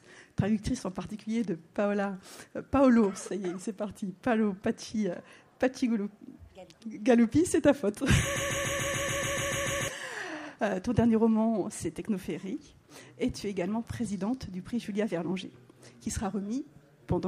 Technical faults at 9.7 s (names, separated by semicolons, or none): broken-record loop